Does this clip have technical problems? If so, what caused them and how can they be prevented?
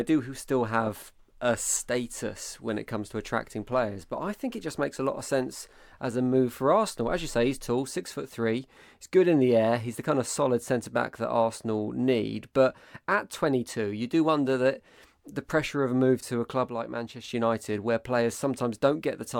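Yes. Right after "move to a club", from 16.69 to 17.24 s, the speech drops abruptly by about 6 dB. One channel drops out, likely a stereo side lost briefly before the mono sum. Prevent it by securing cables and connectors on both inputs.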